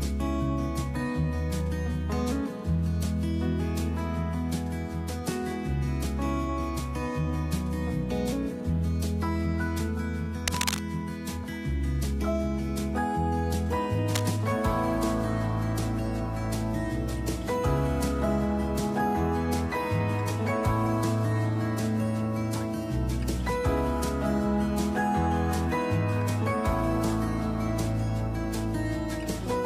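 Cable scratch noise appears from 10.47 to 10.80 s and from 14.15 to 14.30 s as dense, uneven rustling only slightly below the audio level, likely from a worn connector being moved.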